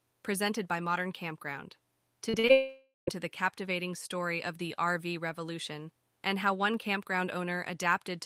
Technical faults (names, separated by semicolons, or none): short concealed packet loss; long network dropout